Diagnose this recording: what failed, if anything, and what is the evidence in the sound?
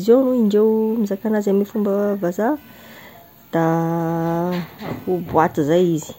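Computer activity noise in the analogue wiring: a faint chirping buzz pulsing around 500 Hz, about 40 dB down, from 2.56 to 5.21 s after "anazy amin'ny fomba vazaha". Unlike steady mains hum, it follows computer load on the shared ground.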